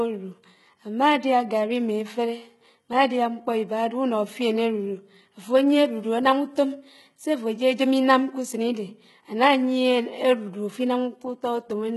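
A speech recording whose upper register sounds synthetic from start to finish: s sounds come out gritty and lispy, with a metallic sheen over the treble, and nothing at all is left above about 11.8 kHz. The damage is heavy and constant. The likely cause is HE-AAC compression at a very low rate, consistent with HE-AAC v2 around 16 kbps, where the treble is rebuilt by copying lower bands upward, so its harmonics no longer match the real ones.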